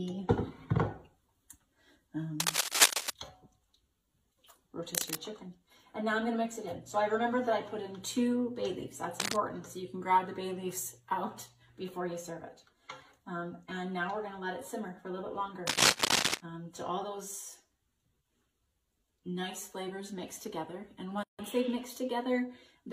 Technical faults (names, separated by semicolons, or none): cable scratch noise; gap at a join of encoded pieces